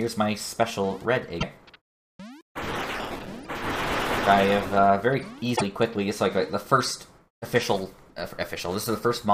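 Two brief glitches break the sound, at 1.37 to 1.43 s and 5.53 to 5.62 s. This is damaged data in a compressed stream: corrupted frames garble briefly before the decoder resyncs.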